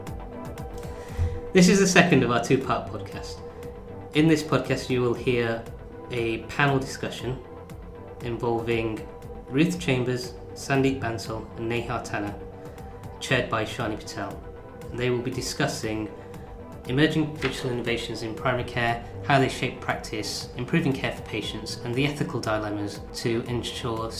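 No technical faults are audible.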